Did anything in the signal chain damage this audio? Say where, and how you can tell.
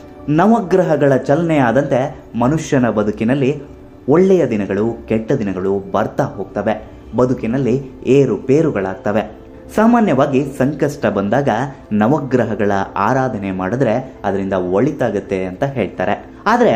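No, nothing in the signal chain damaged this audio.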